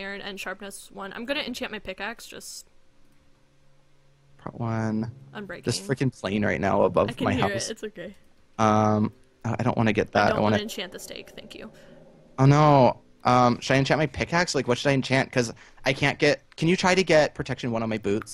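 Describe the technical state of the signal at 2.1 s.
At 2.1 s the signal is intact, with no audible fault at that moment.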